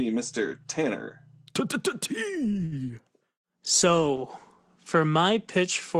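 At 2.65 to 2.75 s there is a short stall from a late packet. A packet arrived late and the jitter buffer ran dry. The receiver held the last sound for about 62 ms, then resumed where it stopped. Nothing is lost. The speech simply drags, with a slight buzz or dip, and everything after sits 62 ms later.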